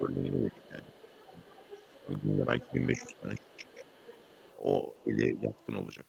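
Right through the speech there's overlap-add ripple: the frames were windowed and rejoined with an overlap that doesn't sum flat, so the level pumps around 50 times a second, swinging by about 60 dB. That gives a harsh, robotic flutter over everything.

On top of that, the talker gets pushed down in what sounds like speech suppressed in double talk, likely an echo canceller ducking both sides while the far end talks. It dips by roughly 15 dB from 0 to 0.94 s, then by roughly 10 dB at 1.31–1.46 s, 2.01–3.69 s and 5.01–5.54 s.

Overlapping those dips, the other side's voice is leaking through, likely loudspeaker pickup the canceller missed. It sits roughly 25 dB down at 0.6–2.21 s and roughly 20 dB down at 2.61–4.57 s. After that come faint scraps about 35 dB down at 4.95–5.01 s and 5.35–5.66 s.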